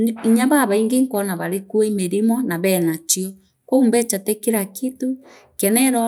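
No technical faults can be heard anywhere in the speech recording.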